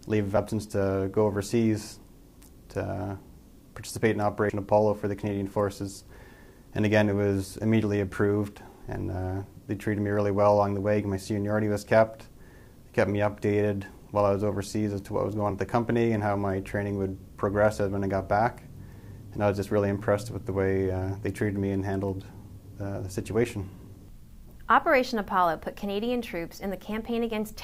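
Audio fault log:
4.50 s, compressed frames skipped: the audio lurches forward by about a tenth of a second, which fits roughly three 32 ms frames the decoder never played.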